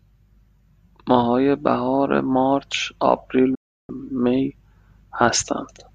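At 3.55 s the receiver stops getting decodable data, either because the digital signal drops or because incoming frames fail their checksum, and it mutes the output until clean frames arrive again. This is a digital broadcast dropout. The speech fades out over about 8 ms, leaving a hole of roughly 0.35 s that fits around 14 lost frames. It returns at 3.90 s, and whatever was said during the gap is gone.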